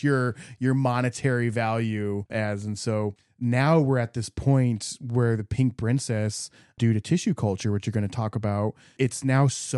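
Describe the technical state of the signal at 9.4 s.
Around 9.4 s the speech signal is intact, with no audible fault at that moment.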